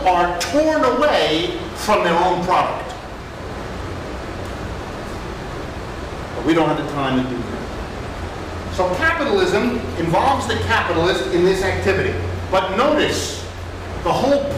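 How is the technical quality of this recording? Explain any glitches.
No glitches turn up anywhere in the recording. Nothing interrupts, distorts or degrades the audio at any point.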